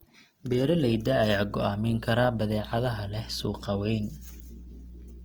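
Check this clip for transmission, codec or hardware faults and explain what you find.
The clip shows one codec fault, present for the whole of the speech: Opus compression.

Throughout, the speech sounds grainy and rough, with a hiss-like texture. This is likely Opus running in its music (CELT) mode at a low rate, which fits roughly 24 kbps. Short of bits, the encoder preserves each band's energy but fills the band's detail by folding lower bands or with noise. On a spectrogram, the bands stay filled to about 20.1 kHz with few holes, but harmonics look smeared and speckled.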